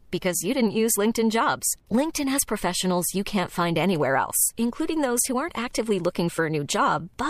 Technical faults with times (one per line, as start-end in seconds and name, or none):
none